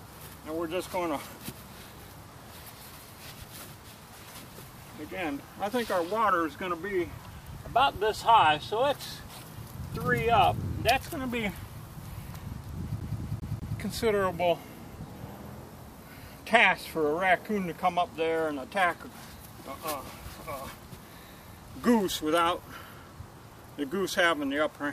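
From 13.00 to 13.79 s the disc sticks on one turn: a scratch keeps throwing the laser back, so a 198 ms fragment repeats four times, each with a brief mute.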